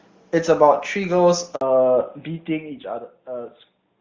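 A handover gap at 1.55 to 1.61 s cuts this speech recording to silence for about 60 ms. The call was passed from one network link to another, and no speech frames arrived while the switch was made, so the sound falls away almost at once and returns only when the new link begins carrying audio. Whatever was said in that interval is simply missing, not smoothed over or repeated.

A fallback to narrowband follows from 1.61 s to the end. Before the gap the audio has the wider, clearer top end of HD Voice, which fits AMR wideband at its highest rate with little or no audible codec damage. Afterwards nothing is left above 4 kHz. The call has dropped to an older narrowband codec, consistent with AMR-NB at 12.2 kbit/s, so the speech turns noticeably duller and rougher, with the sibilants and airy upper detail gone.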